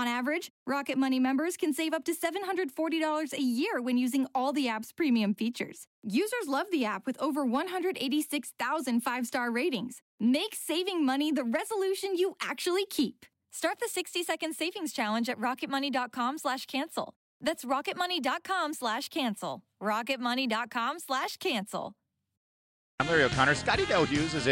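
No technical faults are audible.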